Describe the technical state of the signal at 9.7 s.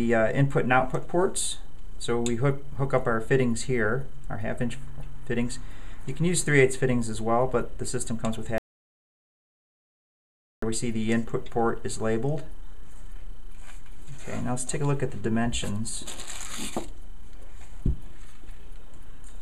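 At 9.7 s the signal is in an audio dropout to silence, 8.58–10.62 s: about 2.04 s of silence, likely from lost input, with no room tone.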